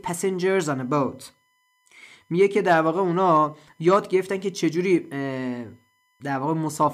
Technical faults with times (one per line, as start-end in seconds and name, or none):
0.00-6.94 USB whine